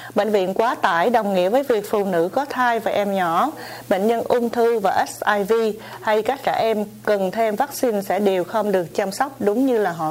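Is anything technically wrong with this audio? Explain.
No, nothing technical stands out here; it all comes across just as it should, with nothing that needs pointing to.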